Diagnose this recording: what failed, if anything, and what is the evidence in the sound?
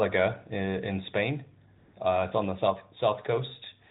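Microphone volume stepped down, at the call-processing stage: the software likely judged the input too hot and cut the device's input volume in single steps. The speech and background drop suddenly by about 1 dB at 1.02 s, then by about 3 dB at 2.70 s.

Microphone overload, at the converter: the input gain was likely set so high that peaks exceeded full scale by about 2 dB. Between 2.68 and 2.70 s a small share of samples is flattened, giving a brief harsh crackle just before the second level drop.

AMR comfort noise, in the codec's silence handling: the sender judged the talker silent and sent no speech frames for 160 ms, so the receiver synthesised filler noise. From 1.78 to 1.94 s the real background, already band-limited by the 12.2 kbps narrowband AMR path, gives way to a smooth, steady hiss that switches in and out.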